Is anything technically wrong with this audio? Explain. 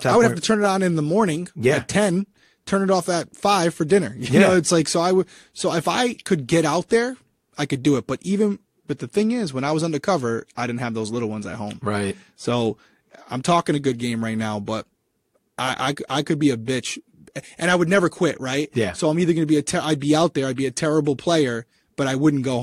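No, nothing is technically wrong with this audio.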